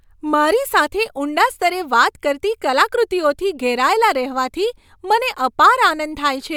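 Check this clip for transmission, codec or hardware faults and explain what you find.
No transmission, codec or hardware faults turn up in this clip.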